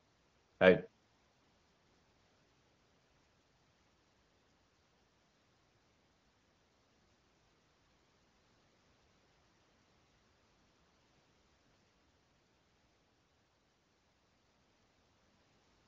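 No technical faults occur in this speech clip, which is carried over AMR wideband (HD Voice) at 18.25 kbit/s with nothing above about 7.6 kHz.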